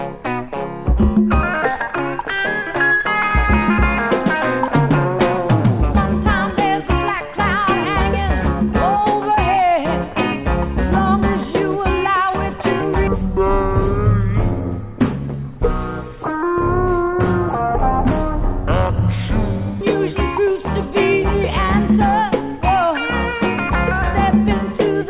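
Wrong sample rate from 13.07 to 19.81 s: this stretch plays back at half the rate it was captured at, with no conversion in between, so everything runs at 0.5 times speed and drops a full octave, 12 semitones. The sound turns slow and dragging, and every frequency is halved at once, which fits 16 kHz material being played out at 8 kHz. Because speed and pitch move together, the change is immediately audible.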